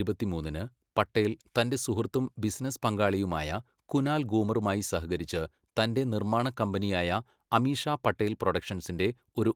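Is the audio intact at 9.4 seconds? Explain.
Yes, the speech is intact at 9.4 seconds, with no fault to be heard at that moment.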